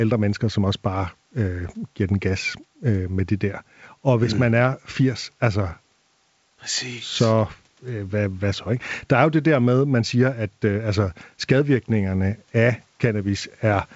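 No technical faults can be heard in this speech.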